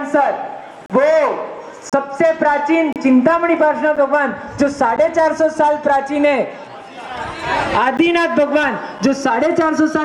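Seven short holes of silence cut through the sound: 0.86–0.90, 1.90–1.93 and 2.93–2.96 s, then briefer ones at 3.96, 4.96, 7.97 and 8.99 s. It's a gap between stream segments on 1-second segments. Timestamps leave space the player fills with hard-edged silence, but no audio is lost.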